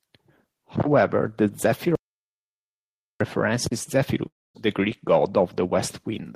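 At 1.95 s the speech cuts to dead digital silence until 3.21 s, an audio dropout to silence, likely a lost input, with 1.25 s simply gone. Then at 4.27 s there's a long network dropout, likely packets not arriving: the last sound smears into a fading buzz or hiss, then silence, and speech resumes at 4.56 s, missing about 0.28 s.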